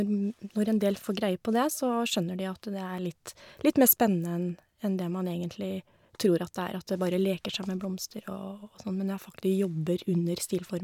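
No technical faults can be heard anywhere in the recording, and the signal stays steady and intact throughout.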